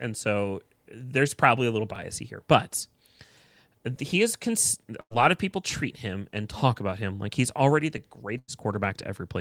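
Overlapping chunks at 1.96 s, just after "there's probably a little": the audio appears to be handled in 2.0 s blocks, and this block begins about 7 ms before the previous one ended. That sliver plays twice at the join, producing a brief click or stutter.

A burst of packet loss hits at 5.01 to 5.15 s and again at 8.38 to 8.51 s, the second right after "like he's already the". Each time, roughly 60 ms of audio never arrives. The receiver fills about 95 ms by stretching the last sound and fading it, then resumes past the missing stretch.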